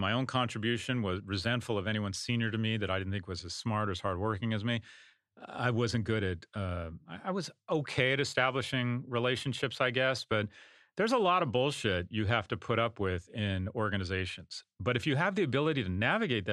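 Nothing stood out as a technical fault when listening to this speech recording.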